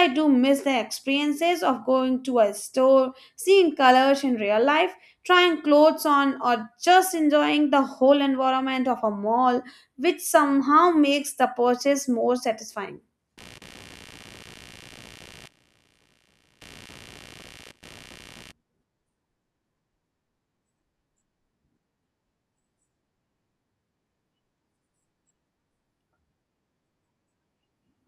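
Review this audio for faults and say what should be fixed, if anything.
There's computer activity noise from 13.38 to 18.52 s, right after "the purchase more satisfying": a buzzy chirp pulsing around 70 Hz, roughly 25 dB under the speech, tracking machine load rather than the talking. Fix it by isolating the interface's ground, with a ground-loop isolator or a USB isolator.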